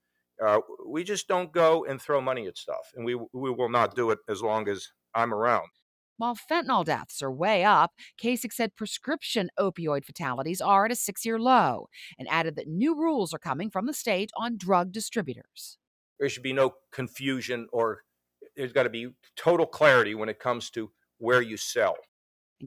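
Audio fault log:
Nothing stood out on listening; no fault could be heard at any point in the audio.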